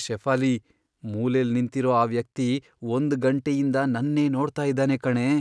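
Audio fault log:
No faults found in this speech recording.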